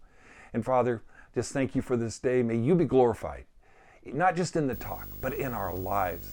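From 4.73 s onward, coupled video or display buzz: a 50 Hz hashy buzz plus a 15.6 kHz line tone, seen as spectrogram harmonic stripes and one high line.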